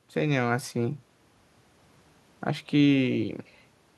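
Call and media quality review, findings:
Nothing to flag on this one: the speech comes through with no audible glitches, dropouts or distortion anywhere in the clip.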